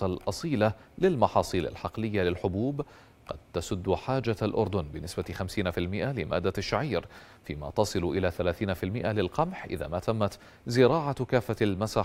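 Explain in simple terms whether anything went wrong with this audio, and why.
Nothing went wrong here; no audio faults can be heard.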